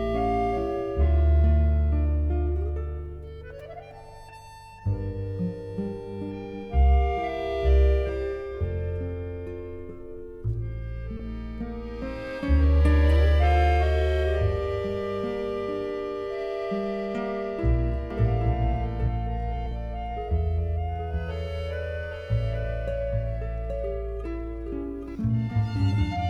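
Two separate problems show up in this audio. The first is a short stall from a late packet at 11.17 to 11.22 s: a packet didn't arrive on time, the jitter buffer ran dry, and the receiver held the last bit of sound for about 20 ms until the data caught up. Nothing is actually lost, but that sound hangs on a beat too long, and everything after it sits 20 ms later than before. The second is a doubled audio track from 18.1 s to 25.2 s, where a full-band copy of the same material runs roughly 0.7 s behind the original and maybe 5 dB quieter. It sounds like a flat, dry echo with no room tail, and it switches on and off abruptly at those boundaries, likely because a second, slower capture path was mixed in alongside the main one.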